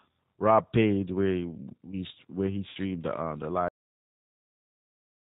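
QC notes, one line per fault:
throughout: G.729 codec. The speech has no content above 4 kHz. Each frame is rebuilt from a vocal tract filter, a pitch estimate and a few fixed pulses, so the speech is slightly rough and synthetic. The damage is plainly audible, which fits an 8 kbit/s G.729A stream. It differs from plain band-limiting because it adds that rough, synthetic texture; a simple low-pass would leave the speech smooth.
2.69–2.77 s: VoIP packet loss concealed by the speech codec. After "where we where he", about 60 ms of audio is missing, which fits three lost 20 ms packets. Instead of a gap, the decoder keeps repeating its last pitch and filter at falling gain, so the sound smears into a fading buzzy tone or coloured noise. The rebuilt frames depend on earlier ones, so the speech stays weak and distorted for a short time after it resumes at "the um the". A hard dropout would be a clean silence instead.
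3.68 s: cut-off end. Just after "the um the", the audio stops in the middle of a sound and drops straight to digital silence with no decay, and the silence lasts to the end of the clip. The final buffers were never written, so the recording ends abruptly. This differs from the packet-loss event because nothing is concealed and nothing fades. It also differs from a fade-out because there is no gradual drop in level.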